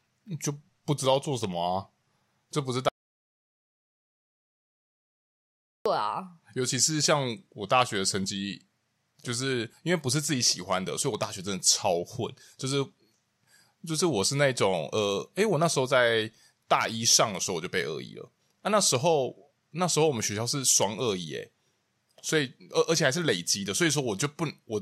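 From 2.89 to 5.86 s, an audio dropout to silence, likely a lost input: speech cuts mid-flow to silence with no room tone, unlike gating.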